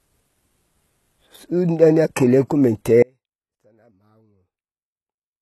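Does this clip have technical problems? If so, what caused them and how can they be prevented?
Yes. The whole clip sounds like likely HE-AAC compression at a very low bitrate, around 16 kbps. The treble is rebuilt by copying lower bands upward rather than coded directly, so s sounds come out gritty and a bit metallic, and nothing survives above about 12.3 kHz. To prevent it, encode at a higher bitrate or use plain AAC or Opus so the top end is actually coded.

From 3.03 s to the end the speech suddenly drops out to a faint residue, roughly 35 dB below normal, rather than fading. That abrupt cut with only faint sound left is likely a lost feed while the downstream path stayed live. To prevent it, check the source connection and link stability, and monitor the feed so a drop gets caught right away.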